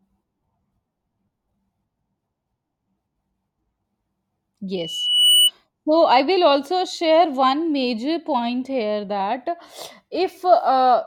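At 4.75 s the microphone starts picking up the loudspeaker it feeds, and around 3 kHz the gain round that loop rises above one, so the tone reinforces itself on each pass. A pure high squeal swells out of the speech over about half a second, climbs to roughly 5 dB above the voice, and holds until it cuts off at 5.51 s, when the loop is broken.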